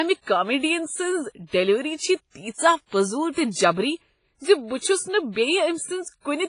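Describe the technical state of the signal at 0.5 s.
At 0.5 s the speech has been through what is likely WMA compression, and that damage runs through the whole clip rather than starting there. The heavy artefacts fit a low bitrate around 24 kbps: the transform encoder spreads quantisation noise over long blocks and discards weak spectral lines. The result is a ringing, washy sound with a hiss that swells and fades with the signal, and nothing remains above 10.1 kHz.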